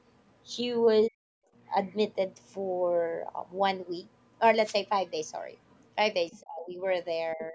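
From 1.08 to 1.46 s the speech sinks by something like 40 dB in speech suppressed in double talk. The echo canceller likely ducked the talker while the far end spoke.

At 1.86 to 1.96 s and again at 5.7 to 5.85 s, a faint second voice appears far below the talker. This is the other side's voice leaking through, likely uncancelled loudspeaker echo. It differs from reverberation because it is a different voice, not a tail of the talker's own.

A louder scrap of leakage follows at 6.34 to 6.4 s. Right after it, from 6.41 to 6.8 s, the talker drops by about 30 dB. The dip comes again more mildly, about 15 dB, from 7.35 s to the end.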